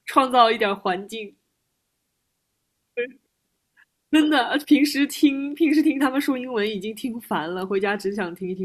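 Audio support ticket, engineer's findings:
No technical faults found in the speech audio for this ticket.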